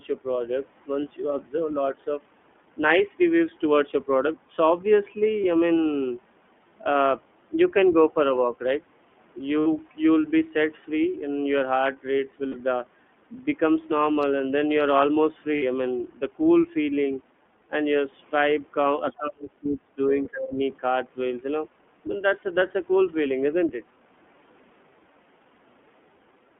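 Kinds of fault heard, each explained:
iLBC codec: The speech sounds slightly rough and synthetic throughout, with nothing outside roughly 200 Hz to 3.4 kHz. That points to a narrowband VoIP codec near 15.2 kbps coding each 20 ms frame independently, and its damage is plainly audible across the clip.
Lost iLBC frames: Brief held, faintly buzzy vowel-like patches replace the speech at 5.42 s for 20 ms, then for 60 ms each at 9.60 s, 12.49 s and 15.56 s. The decoder repeats the last pitch cycle with noise, and the voice recovers at once.
Speech suppressed in double talk: The voice dips slightly around 8.07 s, then drops sharply, at most by about 30 dB, from 19.17 to 20.1 s and again from 20.31 to 20.6 s. The likely cause is an echo canceller turning the talker down while the far side spoke.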